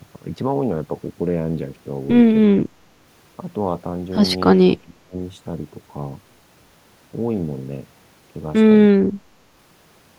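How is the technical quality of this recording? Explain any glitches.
The speech has three brief dropouts. At 2.46–2.7 s, 4.78–5.17 s and 8.96–9.26 s the level dips sharply, by roughly 25 to 30 dB at worst. This is likely speech suppressed in double talk, with the echo canceller muting the talker while the far end also spoke.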